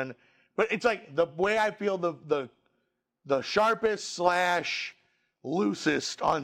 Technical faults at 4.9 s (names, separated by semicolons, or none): overlap between stream segments